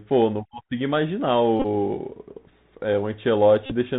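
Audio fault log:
throughout, Bluetooth CVSD headset codec: Nothing above 4 kHz gets through, and a granular hiss sits under the speech. The codec follows the waveform one bit at a time with an adapting step, which fits a 64 kbps stream. Loud bright sounds outrun the step, so s sounds turn scratchy and peaks distort. A plain low-pass filter would only dull the sound, with none of this slope-overload grit.
1.60 to 1.66 s and 3.66 to 3.72 s, Bluetooth headset packet repeated: Each span turns into a brief rasping buzz near 267 Hz. Lost voice packets were replaced by decoding the previous packet's bits again, so the same 3.75 ms slice repeats at that rate. About 41 ms of the first span and 45 ms of the second were repeated. The longest unbroken run was about 20 ms in the first span and about 40 ms in the second, so the buzz holds longer there. A dropout would leave silence, and smooth concealment would stretch the sound instead of buzzing.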